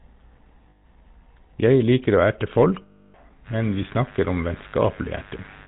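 From the start the speech has a buzzy, gravelly roughness, with nothing above about 4 kHz, the sound of the GSM full-rate codec, which fits its 13 kbps rate. The codec models the vocal tract and drives it with a regular pulse train that keeps only every third excitation sample, so the fine detail of the voice is replaced by coarse, periodic grit. The damage is plainly audible throughout.

At 0.70 to 0.85 s the sound freezes into a rough, metallic ring for about 140 ms. These are lost GSM frames: when frames fail to arrive, the decoder repeats the settings of the last good frame at falling level, so whatever was sounding is held and smeared instead of continuing.

A longer loss follows just after "liker å erte", from 2.82 to 3.15 s, lasting about 320 ms. The metallic ring is heard again, held for longer before normal decoding resumes.

From 3.44 s to the end a steady, raspy buzz sits under the speech, roughly 25 dB below it. 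This is mains buzz at 50 Hz: sharp switching spikes from something like a dimmer, rectifier or poor shielding enter twice per mains cycle, and their harmonics of 50 Hz spread up into the kilohertz range, giving the harsh edge rather than a smooth hum.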